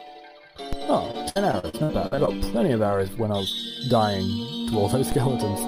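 At 0.73 s a DC step shifts the waveform's zero line, then decays away through a 5 Hz high-pass, heard as a low thump or click. From 1.11 to 2.29 s, repeated packet loss (robotic sound) leaves nine gaps, the longest 64 ms, each patched by extending the previous sound, so the stretch turns choppy and robotic. A second DC step at 5.12 s thumps again as its offset likewise decays.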